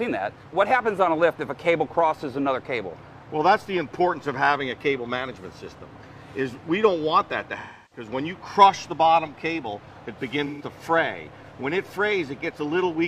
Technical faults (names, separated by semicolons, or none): AAC frame loss with concealment